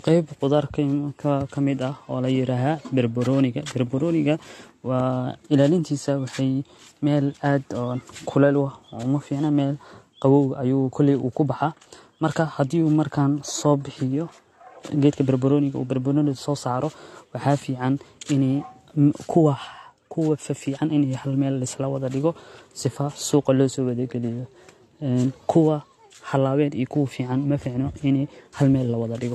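Throughout the speech the top end stops abruptly at about 12.1 kHz. Smeared, metallic coding artefacts are layered on one another. This is likely transcoding between lossy codecs: HE-AAC at 40 kbit/s, then AAC-LC at 48 kbit/s re-encoding the earlier damage.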